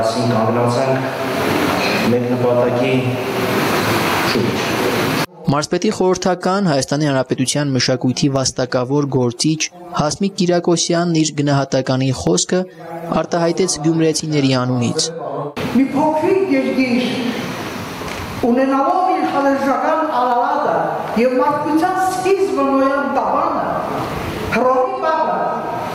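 Gain pumping runs through the whole clip. The level swings by roughly 25 dB. The likely cause is an input gain set far too high for the microphone, with a fast limiter or compressor clamping it down whenever the signal peaks. Loud and quiet passages sit unnaturally close in level, and the audio sounds squashed and breathing.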